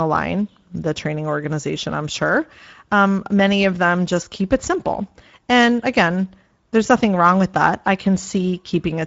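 From start to finish the speech has a rough, hoarse, noisy texture, and nothing is present above 7.7 kHz. This is Speex codec damage, plainly audible throughout. Speex is a CELP codec that rebuilds speech from a vocal-tract filter plus a coded excitation signal. At this rate, which fits a Speex setting of around 17 kbps, the excitation is coded coarsely, giving the grainy hoarseness, and the wideband mode's limit removes everything above about 7.7 kHz.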